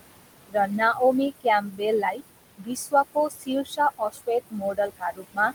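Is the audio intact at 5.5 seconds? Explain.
No, 5.5 seconds sits right at the tail of a stretch of speech cut by the noise suppressor, running from about 4.5 to 5.52 s. The suppressor mistook parts of the speech for background and pulled them down along with it, by as much as about 20 dB, across just under half a second in total, so the speech there sounds swallowed and faint. On top of that, noise suppressor artifacts run through the whole clip. The room noise, sitting about 12 dB under the speech, gets pushed down by about 20 dB in the gaps and comes back up under the speech.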